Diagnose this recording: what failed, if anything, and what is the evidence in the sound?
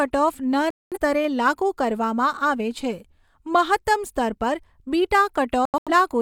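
Digital broadcast dropout at 0.70–0.98 s and 5.65–5.91 s, a failure in broadcast reception. The first mutes about 213 ms just before "સ્તરે લાગુ કરવામાં". The second breaks into short holes, the longest about 85 ms. The receiver silenced corrupt or missing frames, and their audio is gone.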